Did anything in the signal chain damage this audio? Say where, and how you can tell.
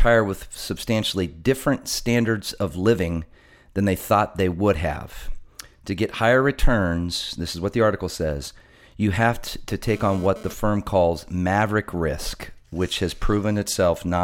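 Yes. In the analogue wiring, a GSM phone buzz cuts in from 9.71 to 10.54 s, between "article says you have" and "calls maverick risk which", sitting about 18 dB below the speech. Its raspy fundamental near 217 Hz, with a dense harmonic comb, comes from the circuit rectifying a nearby handset's transmit bursts. Mains hum sits at 50 or 60 Hz multiples and runs continuously; this starts and stops abruptly, as data transfers do.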